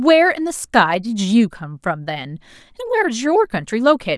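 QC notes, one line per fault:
No faults found in this recording.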